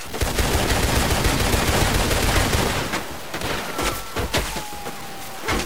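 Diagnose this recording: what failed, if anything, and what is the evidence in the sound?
Grainy distortion runs through the whole sound, with the error only about 15 dB below the signal. The likely cause is low bit depth without dither at sample-format conversion. The grain points to truncation to 5 bits, so the error follows the signal.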